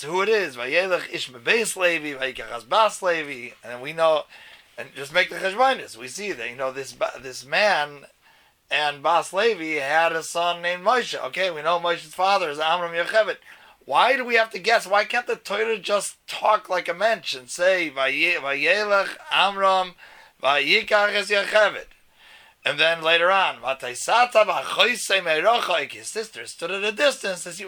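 No technical faults can be heard anywhere in this audio.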